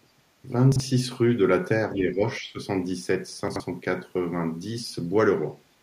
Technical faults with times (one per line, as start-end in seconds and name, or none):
0.72-0.80 chunks out of order
1.95-2.58 speech suppressed in double talk
3.48-3.60 chunks out of order